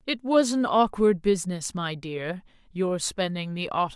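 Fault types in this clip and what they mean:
No faults can be heard anywhere in the recording.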